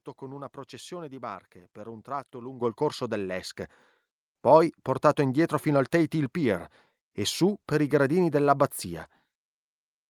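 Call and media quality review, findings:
Microphone volume stepped up twice: at 2.61 s, between "barche per un tratto" and "il corso", about 10 dB, then at 3.63 s about 4 dB more. Voice and background jump together, so it's the app's auto input gain raising device volume.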